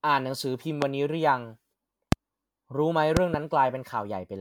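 Throughout the speech runs a swirly, hollow smear with blurred consonant attacks, the sign of generation loss. The likely cause is about four successive MP3 encodes near 130 kbit/s, each requantising on a shifted frame grid, with nothing above 19.9 kHz. A single encode at that rate would sound far cleaner.

At 0.82 s and 2.12 s comes a loud pop, each about 20 ms long and roughly 20 dB above the speech. At 3.17 to 3.36 s two pops arrive in quick succession. These likely come from a voltage step or static discharge. The speech continues beneath each one, which distinguishes these pops from a dropout or an edit.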